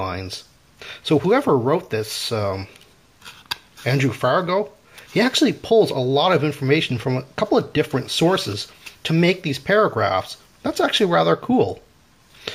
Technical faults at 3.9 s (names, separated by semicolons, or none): none